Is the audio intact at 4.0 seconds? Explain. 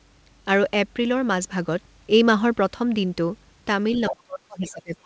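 No. From 3.97 to 4.13 s the echo canceller likely failed to remove the far end's loudspeaker playback from the microphone, so the other side's voice leaks through as a brief scrap of a second talker about 10 dB below the main speech. From 4.1 s to the end, with both sides talking at once, the canceller likely could not separate its own talker from the echo and turned everything down. The speech is suppressed in double talk, dipping by roughly 35 dB at its deepest.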